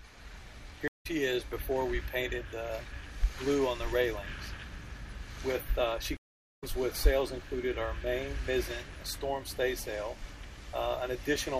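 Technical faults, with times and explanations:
0.88–1.07 s and 6.17–6.64 s, stream reconnect: the connection drops and the player restarts its decoder mid-stream. The waveform goes flat for about 170 ms, then 450 ms, with a blank spectrogram column each time, and sound resumes roughly 0.15 s and 0.2 s further on, skipping material.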